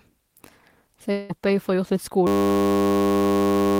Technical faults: long network dropout; system hang loop

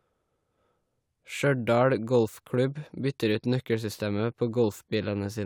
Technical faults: none

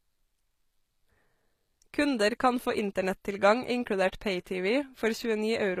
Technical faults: HE-AAC compression

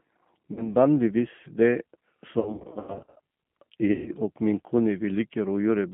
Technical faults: G.729 codec; VoIP packet loss concealed by the speech codec

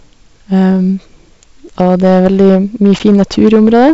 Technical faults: hard clipping; packet loss on an ADPCM call

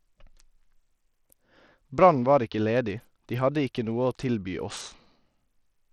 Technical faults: Bluetooth SBC compression

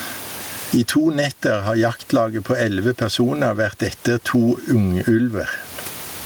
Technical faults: gain pumping

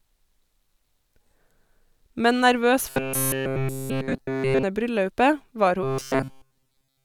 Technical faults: robotic sound from repeated short buffers

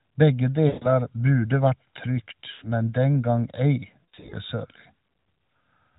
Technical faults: channel delay (comb filtering); lost AMR speech frames

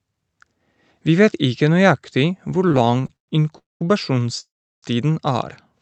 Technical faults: repeated stalls (stutter); call audio freeze

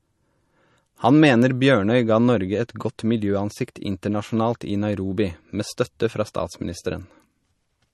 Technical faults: MP3 compression

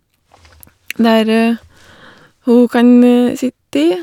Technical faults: none

